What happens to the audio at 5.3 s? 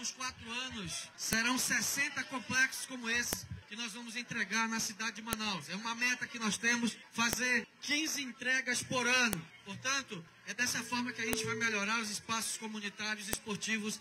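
At 5.33 s a sharp, loud click cuts in: a file header played as audio. When separate WAV pieces are joined or streamed without stripping their headers, those few dozen bytes of metadata are read as sample values, which fits a stream built from pieces about 2 s long. On the waveform it shows as a one-millisecond spike unrelated to the surrounding signal; on a spectrogram, a thin vertical line spanning the full frequency range.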